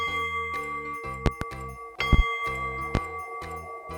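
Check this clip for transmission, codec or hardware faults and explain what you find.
There are loud pops: a double pop at 1.26–1.45 s, another double at 2.13–2.22 s, and a single pop at 2.95–2.99 s. Each is a sharp thump roughly 25 dB above the sound, which continues underneath. The likely cause is a voltage spike from a switch, plug, static or driver glitch, shaped by the downstream circuitry.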